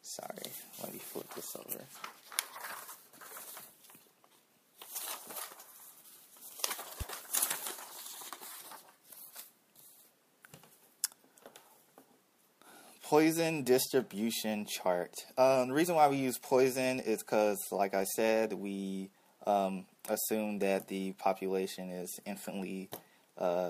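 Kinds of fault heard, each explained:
Loud pop: a single sharp pop from 7.01 to 7.04 s, peaking a few decibels above the sound, likely a voltage step from a switch, plug or static discharge.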